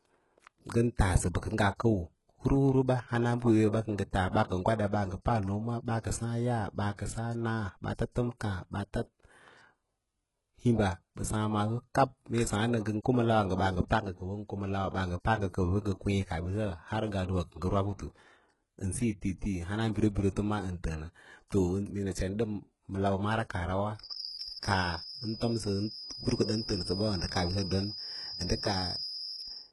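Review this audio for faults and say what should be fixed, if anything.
Throughout, heavy damage from likely HE-AAC compression at a bitrate near 12 kbps: copied, enveloped treble up to 11.5 kHz makes s sounds gritty, unlike a plain low-pass's dull cutoff. Encode at a higher bitrate, or use plain AAC or Opus.

From 23.95 s to the end, a 5.1 kHz whistle sits roughly ten dB below the speech, likely a feedback whistle from a speaker-microphone loop near feedback; it swells and fades, unlike steady electrical hum. Lower monitor gain or separate loudspeaker and microphone.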